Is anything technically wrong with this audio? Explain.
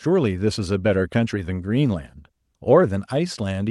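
No, nothing is technically wrong with this speech recording. No fault can be heard anywhere in it.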